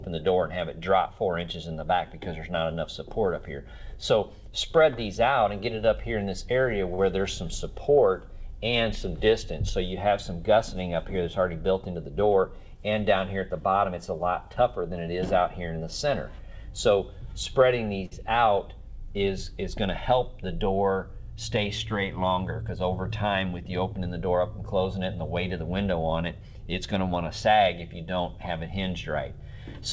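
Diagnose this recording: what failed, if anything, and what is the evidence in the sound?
Network and jitter-buffer stage: short stalls from late packets at 6.94–7.00 s and 18.06–18.14 s. Each time a sound gets held too long, with a buzz or dip, because the buffer ran dry and stretched the last audio by 44 ms and then 56 ms. Nothing is lost; playback just resumes later.

Same buffer, opposite direction: jitter buffer speed-up at 11.71–12.23 s (108%) and 23.25–23.99 s (106%). After packets bunched up, the receiver trimmed repeated pitch-period slices, around 50 ms each time, so the sound rushes at unchanged pitch. All of this is over a G.722 64 kbps link with nothing above 8 kHz.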